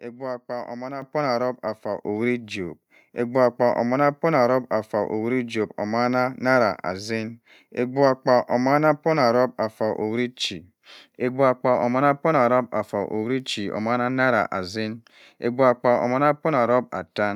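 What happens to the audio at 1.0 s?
At 1.02 s the microphone volume stepped up: the call software judged the input too quiet and raised the device gain in a single jump of about 8 dB. The speech and the background both get louder at once, with no fade.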